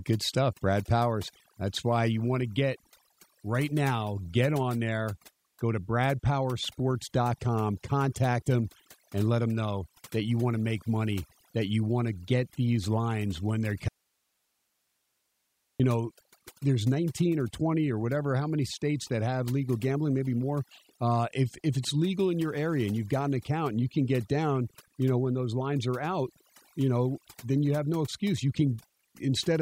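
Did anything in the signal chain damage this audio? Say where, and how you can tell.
Yes. Overdone noise removal runs through the whole speech clip, at the processing stage. The background drops and breaks up into twinkling specks. The reducer was set too strong. It pulls bands near its noise estimate far down, taking quiet voice detail too.

An audio dropout to a faint residue runs from 13.88 to 15.80 s, just after "these lines when they". The sound cuts abruptly, leaving only hiss about 50 dB down for 1.91 s. It returns at "know there's". This is likely an upstream connection loss while the path after stayed live.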